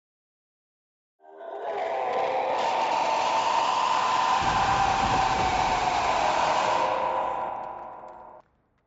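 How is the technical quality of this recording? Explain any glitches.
No glitches or faults are audible.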